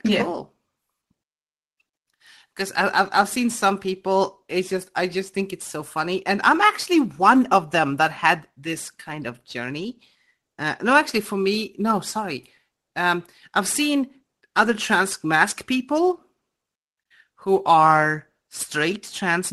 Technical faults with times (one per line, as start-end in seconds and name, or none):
none